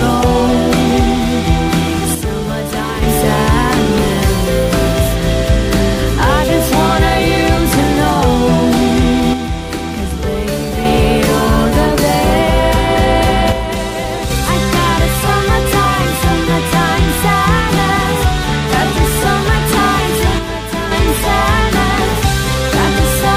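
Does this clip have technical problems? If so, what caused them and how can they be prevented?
Yes. The problem is likely one channel dropping out, at 2.15–3.02 s, 9.34–10.85 s, 13.52–14.30 s and 20.39–20.91 s. Each time, the summed sound falls abruptly by about 6 dB, and anything carried only in that channel vanishes. Secure cables and connectors, and meter both channels during recording, to prevent it.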